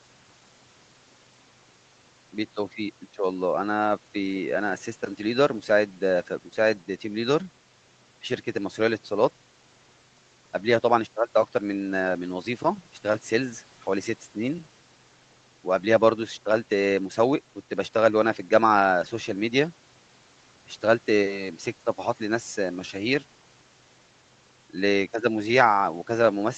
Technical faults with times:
none

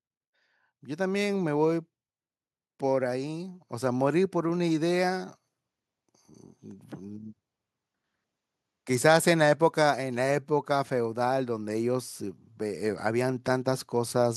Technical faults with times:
0.80-1.61 automatic gain rising

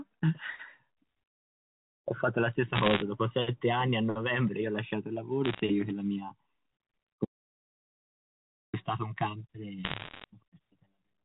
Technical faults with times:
2.75-3.02 bit errors on a digital phone line
5.45-5.60 bit errors on a digital phone line
7.25-8.73 audio dropout to silence
9.84-10.24 bit errors on a digital phone line

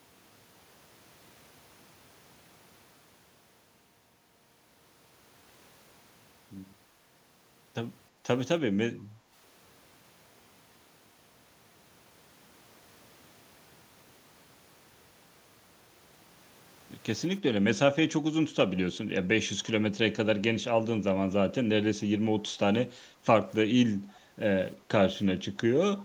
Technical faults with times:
8.10-8.23 background gated by the echo canceller
9.07-9.32 background gated by the echo canceller
23.06-23.24 background gated by the echo canceller
24.15-24.20 echo leak
24.20-24.36 background gated by the echo canceller

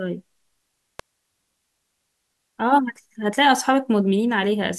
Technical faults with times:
0.99 electrical switching spike

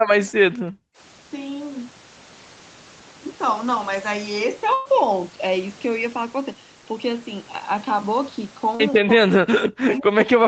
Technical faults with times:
0.51-0.98 background gated by the echo canceller
4.73-4.87 burst of packet loss
8.75-8.81 short concealed packet loss
9.01-10.48 speech suppressed in double talk

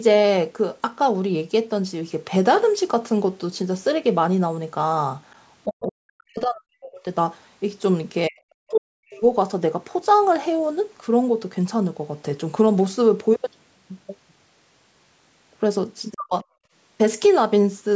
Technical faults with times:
5.65-7.05 speech suppressed in double talk
8.28-9.22 speech suppressed in double talk
8.75-8.81 other side's voice leaking through
16.14-16.34 speech suppressed in double talk
16.62-16.72 background gated by the echo canceller

